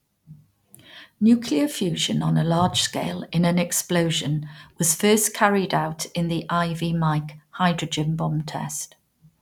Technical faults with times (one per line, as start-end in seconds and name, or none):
none